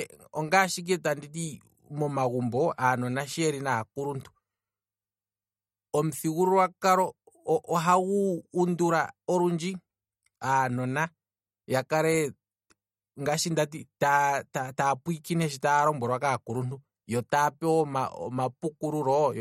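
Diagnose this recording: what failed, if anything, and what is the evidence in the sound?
The codec stage failed: the speech was likely squeezed through MP3 compression at a low bitrate, which fits something around 48 kbps. Short of bits, the encoder drops weak frequency lines, and they flicker in and out between frames. Throughout the clip that gives the speech a plainly audible watery, swirling texture, with metallic chirps on s sounds and smeared consonant attacks. Nothing is present above 16 kHz, where the encoder cut the treble off.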